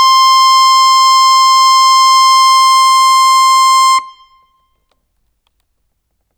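No technical faults can be heard anywhere in this music.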